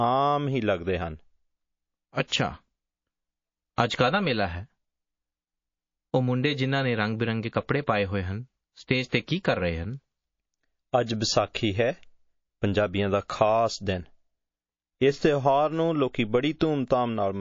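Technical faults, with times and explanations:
Throughout: MP3 compression, and the damage is plainly audible. The treble is cut hard and weak detail flickers in and out between frames, giving a watery, swirly quality with smeared attacks. That's likely a very low bitrate, something like 32 kbps.
2.28–2.32 s and 9.09–9.12 s: pre-echo. A short hiss creeps in ahead of each sharp attack, about 44 ms and 29 ms early, with the noise up by about 20 dB and 16 dB. The codec spread its noise across a roughly 72 ms block instead of switching to short blocks, so the attacks sound soft.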